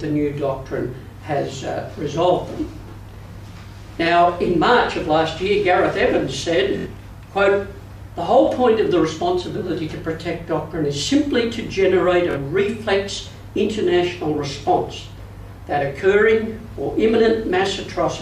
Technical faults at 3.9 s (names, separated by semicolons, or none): none